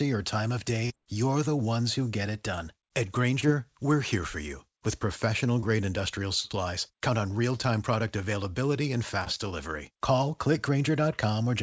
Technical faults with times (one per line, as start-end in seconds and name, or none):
0.86-0.92 short concealed packet loss
3.40-3.44 short concealed packet loss
5.60-5.64 short concealed packet loss
6.40-6.46 short concealed packet loss
9.24-9.28 short concealed packet loss